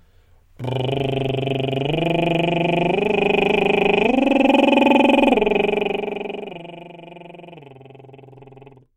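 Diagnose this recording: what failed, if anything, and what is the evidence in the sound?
Zipper noise, 5.59 to 6.89 s: a roughly 20 dB level drop arrives in unsmoothed steps, around 300 per second, each ticking, pointing to per-buffer gain in the driver or buffer stage.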